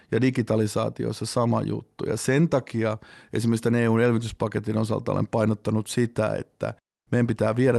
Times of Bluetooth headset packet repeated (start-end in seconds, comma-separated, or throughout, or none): none